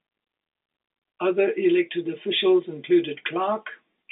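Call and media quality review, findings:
Nothing stood out on listening; the speech carries the narrow 250 Hz to 3.7 kHz band expected of a G.711 telephone line.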